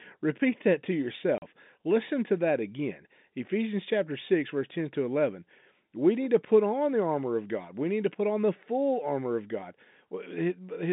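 At 1.38 s, just after "repeat that to", the speech drops out for 40 ms: packet loss filled with silence. The receiver inserted a gap of pure silence, which fits two lost 20 ms packets, and its hard edges cut sharply into the narrowband G.711 telephone sound.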